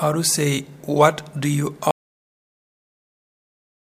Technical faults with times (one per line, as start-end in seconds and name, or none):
1.91-3.96 audio dropout to silence